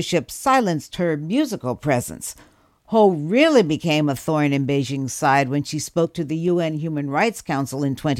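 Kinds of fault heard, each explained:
Periodic USB or driver dropouts: Something keeps stalling the audio path every 0.5 s, so a tiny sliver of the speech, about a tenth of a millisecond, gets skipped. From 5.48 to 7.97 s you hear roughly seven evenly spaced little ticks.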